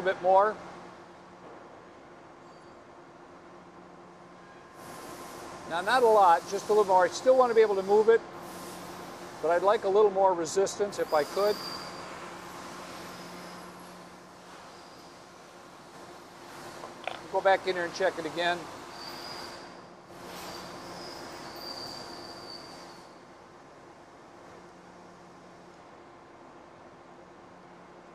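Nothing here stands out as a technical problem; the audio runs along without any dropouts, glitches or other trouble I can pick out.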